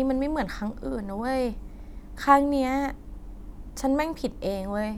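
No technical faults are audible.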